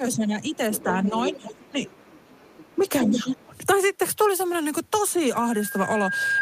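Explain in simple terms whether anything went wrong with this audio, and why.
Yes, several things go wrong.

From the start to 1.87 s, and again from 2.76 to 3.53 s, the talker's voice keeps dipping, getting duller and dropping out in pieces. Over about a second in the first stretch and most of the second, it falls to a noticeably quieter level. This is speech suppressed in double talk, likely caused by the echo canceller turning down everything while both people spoke at once. Unlike a plain dropout, the talker fades and muffles only while the other side is talking.

That other voice is the second problem: the other side's voice leaking through. A second, fainter person can be heard briefly at 0.73 to 0.92 s, for a longer stretch from 1.08 to 2.76 s, and most strongly from 3.01 to 3.37 s, where it is nearly as loud as the talker. It likely comes from the loudspeaker reaching the microphone without being fully removed. 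It is a different voice, not a delayed copy of the talker's own words.

From 5.32 s to the end there is a loudspeaker feedback squeal: a single steady tone at 1.6 kHz that swells over about a second until it is a little louder than the speech. The microphone is hearing the loudspeaker it feeds, and that one pitch keeps building on itself. A single rising tone sets it apart from hum or hiss.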